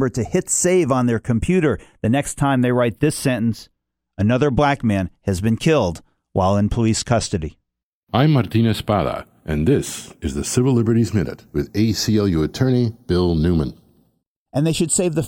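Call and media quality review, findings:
Channels drifting apart, whole clip. Slow flanging on the speech in mono, notches sweeping steadily one way. Probable cause: two capture devices on separate clocks, mismatch around 30 ppm, inter-channel delay creeping to a few tenths of a millisecond by the end. Unlike a fixed polarity or offset fault, the comb keeps moving. Unlike an effects flanger, the sweep never reverses.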